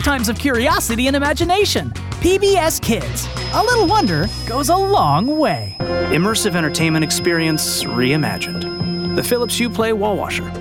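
From 3.25 to 9.80 s, a thin feedback whistle at 5.1 kHz sits about 15 dB down. A speaker-to-microphone loop near feedback is likely.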